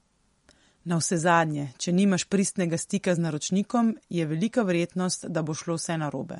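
From start to finish the speech carries plainly audible MP3 compression. Nothing sounds above about 11.2 kHz. Weak detail flickers in and out, giving a watery, swirly texture. The bit budget was likely too small, which fits a rate near 48 kbps.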